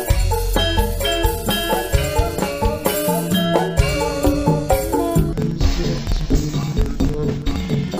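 From 5.33 s to the end, interleaved audio read as planar drops the sound an octave, doubled and choppy, with spectrogram harmonics halved and vertical seams every 46.4 ms, consistent with 2048-sample blocks.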